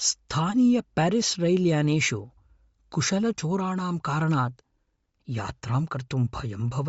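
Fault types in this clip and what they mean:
Bluetooth LC3 compression: throughout the speech, nothing reaches above 7.7 kHz, and the upper band carries a plainly audible breathy, grainy edge where detail has been swapped for filled-in noise. This is likely LC3 coding, consistent with a 32 kbps stream in 10 ms frames.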